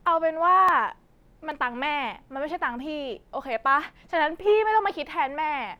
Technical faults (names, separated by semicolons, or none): dropped buffer (overrun)